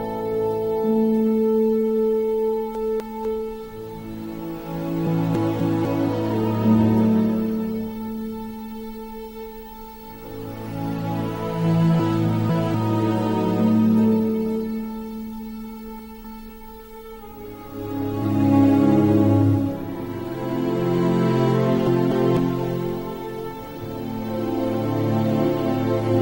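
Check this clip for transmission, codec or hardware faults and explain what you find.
Two kinds of fault occur: chunks out of order and compressed frames skipped.

Chunks out of order occur from 2.75 to 3.25 s, 5.35 to 5.85 s, 11.99 to 12.74 s, 15.99 to 16.49 s and 21.87 to 22.37 s. Each time, a 250 ms block of audio arrives one slot late. At 11.99 s it is two slots late. It plays after material that should follow it. Nothing goes missing, but the reordering leaves three abrupt joins and a jumbled, backward-stepping moment. That reordering separates it from a skip.

Compressed frames skipped occur at 5.06, 10.24 and 18.22 s. Whole coded frames of 21.3 ms are dropped, which fits a 1024-sample frame at 48 kHz. The audio lurches ahead by roughly 150 ms at 5.06 and 18.22 s and roughly 100 ms at 10.24 s, and nothing is heard twice.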